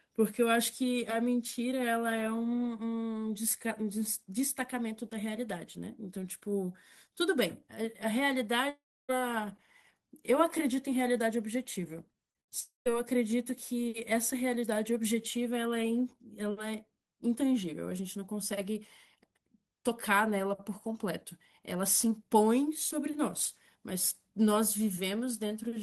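From 8.69 to 9.11 s the speech stops for about 0.4 s. The last sound is carried on as a fading buzz, then about 0.3 s of near-silence follows before the audio resumes further on, with that stretch simply gone. This is a long network dropout, likely caused by packets ceasing to arrive. What separates it from scattered loss is the single unbroken hole and the concealment giving up into quiet.

From 12.13 to 12.52 s the sound turns choppy. This is repeated packet loss, giving a robotic sound. Four short gaps, the longest 70 ms, are each bridged by stretching the previous sound, so about a third of that span is patched rather than real. Here the holes are brief and close together, and the patches come one after another, with no fade to silence between them.

Right after, from 12.6 to 12.92 s, a second long network dropout removes about 0.26 s, likely from another run of lost packets. The fill decays into roughly 0.14 s of silence before the speech returns. 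Throughout, the Opus call path limits the audio to about 12 kHz.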